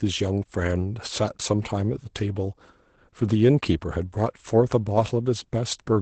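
From start to end the speech carries Opus voice compression in its SILK mode, pointing to roughly 12 kbps. Nothing survives above about 8.7 kHz, and the coarsely coded excitation leaves the voice hoarse and faintly robotic, unlike a simple low-pass filter, which would only dull it.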